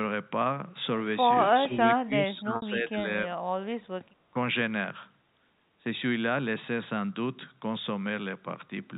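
From 1.51 to 3.34 s the speech dips repeatedly, losing up to roughly 15 dB over about a second and a half in total, so the voice thins and partly drops away in pieces. The likely cause is speech suppressed in double talk: with both ends talking at once, the echo canceller could not tell the local talker from the returning loudspeaker echo and pulled the whole microphone signal down. The same dip of roughly 15 dB returns briefly between 3.59 and 3.72 s.

Inside that first stretch, at 2.56 s, a gap of 60 ms is covered by packet loss with pitch repetition, which fits three lost 20 ms packets. The receiver fills the hole by looping the last pitch period, so the sound turns briefly buzzy and held rather than falling silent, then fades and cross-fades back into fresh audio at 2.62 s.

From 4.12 to 4.22 s the room sound sinks by about 14 dB for well under a tenth of a second and then comes back. 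This is background gated by the echo canceller: while the far-end loudspeaker signal was active, the canceller clamped the microphone hard, taking the ambient noise down with it until it released. All of this sits on a G.711 A-law telephone path at 64 kbps, which keeps everything below 4 kHz.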